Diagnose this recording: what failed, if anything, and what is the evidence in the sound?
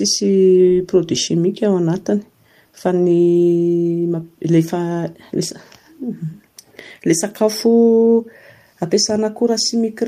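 Nothing in the recording stood out as a fault on listening.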